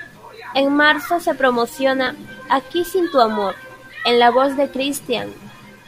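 Speech, with two abrupt discontinuities at 2.07 s and 3.50 s, each heard as the sound jumping forward with no gap of silence. Each jump skips roughly 20 ms of material. The likely cause is a dropped buffer (overrun): the capture side failed to read a block of samples before the hardware overwrote it, so the audio on either side of the lost block is spliced directly together.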